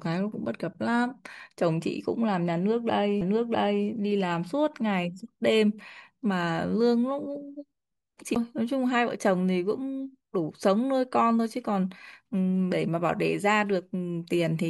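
The disc player's laser jumped to a different turn of the spiral, from a knock or a flaw, at 3.21 s and again at 8.35 s, a CD skip, so this speech clip mutes for a few milliseconds, then roughly 15 ms, and resumes with an abrupt jump in the speech.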